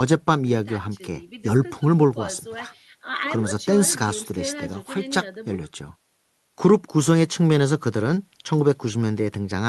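No technical faults can be heard anywhere in this speech recording. It has passed through a call path whose codec keeps the audio band up to about 12 kHz with little above it, which fits Opus at around 32 kbps.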